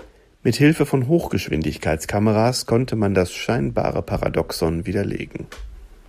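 Listening to this speech recording, nothing stood out as a technical problem.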